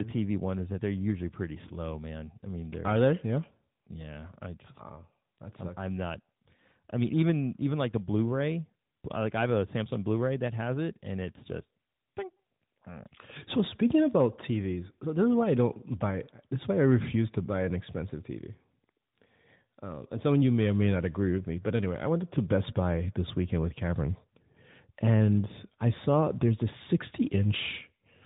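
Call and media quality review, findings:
Tandem speech coding, throughout: rough, muffled, warbly speech, band-limited at 3.8 kHz. Consistent with CVSD then AMR-NB 12.2 kbit/s via G.711; second coder compounds first's artefacts.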